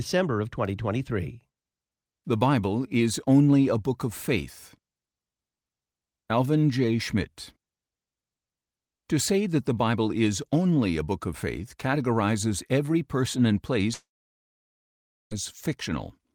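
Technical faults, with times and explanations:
13.93–15.33 s, long network dropout: the speech breaks off and the receiver briefly extends the last sound as a fading buzz, which collapses into about 1.26 s of silence before speech resumes at 15.33 s. Roughly 1.38 s of audio is gone for good, so the speech picks up later than where it stopped, with nothing bridging the gap. The likely cause is a stall in packet delivery long enough to exhaust the receiver's concealment.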